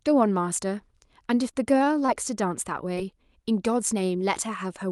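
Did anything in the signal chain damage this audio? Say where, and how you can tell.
Yes, the network leg of the call did. From 1.51 to 2.10 s there's repeated packet loss, giving a robotic sound: five short holes, the longest about 21 ms, patched by extending the preceding speech. That's around 13% of the stretch. Because the gaps recur in a cluster, this reads as choppy and robotic rather than as a single glitch.

A second, isolated event is short concealed packet loss at 2.94 s. One gap of about 20 ms was bridged from the last sound and crossfaded back, leaving a brief smear. Unlike the earlier cluster, it's a one-off, so there's no sustained robotic texture. Through the Opus call path, the band tops out near 12 kHz.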